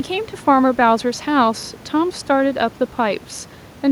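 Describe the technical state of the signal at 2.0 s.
At 2.0 s the signal is intact, with only the room's own background noise sitting about 25 dB below the speech.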